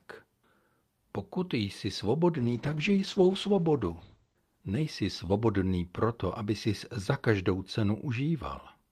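From 2.39 to 6.45 s, starting at "jsi za každou", a call bitrate drop makes the speech rough and muffled, with nothing above 8 kHz, before clearing.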